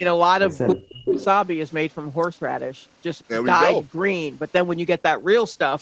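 At 0.00 to 0.04 s and again from 0.74 to 1.19 s, an echo canceller likely treated simultaneous talk as echo, causing speech suppressed in double talk: a brief dip of about 10 dB, then a drop of about 35 dB that cuts the speech out.

From 1.06 to 1.25 s, a far-end loudspeaker echo likely slipped past cancellation, an echo leak: a copy delayed 319 ms, only about 5 dB below the speech, repeats it.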